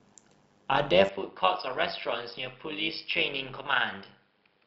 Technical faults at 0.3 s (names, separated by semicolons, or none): overlap-add ripple